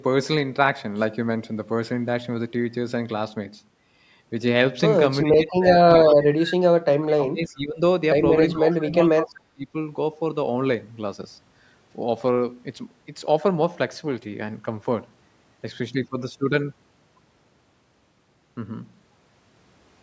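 From 5.25 to 6.55 s, 7.0 to 7.81 s and 8.53 to 9.75 s the speech dips by up to about 25 to 30 dB, most likely speech suppressed in double talk: with both sides talking at once, the echo canceller couldn't separate the talker from loudspeaker echo and turned everything down. Inside the first and last of these, at 5.74 to 5.78 s and 8.71 to 8.76 s, a faint scrap of the voice returns 380 ms late, about 20 and 30 dB below the speech. That is likely an echo leak, where a loudspeaker's sound reached the far microphone and slipped past its canceller.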